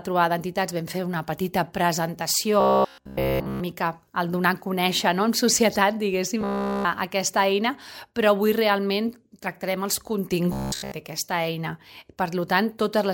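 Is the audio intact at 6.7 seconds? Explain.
No. Robotic sound from repeated short buffers runs from 6.41 to 6.85 s. New audio likely arrived too slowly, so a roughly 15 ms slice was looped over and over, replacing the sound entirely and imposing a rigid, metallic buzz at 66.7 Hz.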